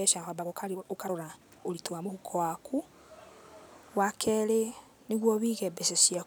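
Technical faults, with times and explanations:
0.00–2.12 s, time-stretched section: software likely squeezed this span to 1.43 times speed by dropping short pieces to hold pitch, so speech sounds rushed before the pace abruptly changes.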